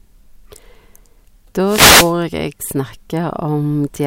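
A short swish of static is heard in the speech from 1.64 to 2.14 s: a wireless microphone noise hit, where the FM radio signal faded and receiver noise broke through.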